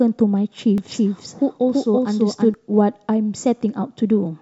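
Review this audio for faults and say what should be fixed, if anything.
A doubled audio track runs from 0.78 to 2.54 s: a second full-band copy of the speech trails by roughly a third of a second at about the same level, starting and stopping abruptly. Unlike a room echo, it has no decay or reverberant colour, likely from a slower duplicate capture path or misaligned edit. Mute redundant capture routes and check edits for overlapping copies before export.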